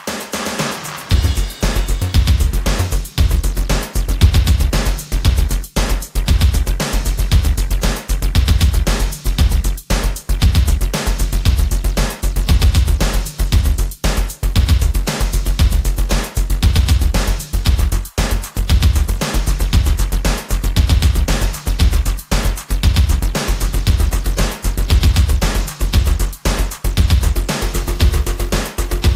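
No technical faults are audible anywhere in the recording.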